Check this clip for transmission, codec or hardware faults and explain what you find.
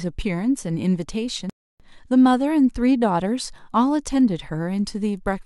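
One fault is present in this speech clip: a playback stall from 1.50 s to 1.80 s. The audio cuts to silence mid-flow for about 0.3 s, then resumes. The likely cause is the player running out of buffered data, or its playback thread being blocked, so nothing reached the output until it recovered. It sounds like an abrupt hole in the speech rather than a fade or a natural pause.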